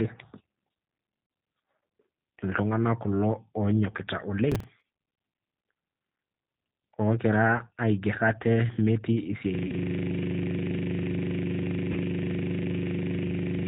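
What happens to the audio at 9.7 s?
Between 9.67 and 9.72 s the sound is briefly stretched and fades, then stays weak for a moment: VoIP packet loss concealed by the speech codec, which fits one lost 20 ms packet that the decoder filled by extrapolating its last pitch and filter. Throughout, including here, the speech is slightly rough and synthetic with nothing above 4 kHz, from the 8 kbit/s G.729 codec's filter-and-pulse reconstruction.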